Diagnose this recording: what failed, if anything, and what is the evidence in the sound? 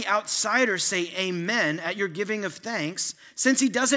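A resampler restarted on every block, at the sample-rate conversion stage, is converting 24 kHz to 16 kHz. A 20 Hz buzz of ticks runs through the speech, one per 50 ms block. Each block edge lacks its true neighbouring samples, leaving regularly spaced vertical lines on a spectrogram and small waveform discontinuities that vanish in pauses.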